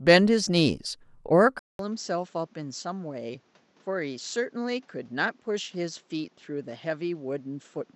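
At 1.59 s the speech drops out for about 200 ms, then returns through what is likely an input switched to a poorer device, lasting to the end of the clip. The new path carries nothing above 7.8 kHz, so the speech sounds duller, sits roughly 10 dB quieter, and brings a new background noise about 35 dB below it. A spectrogram shows a sharp ceiling at 7.8 kHz after the gap, and the waveform a brief flat gap and a smaller envelope.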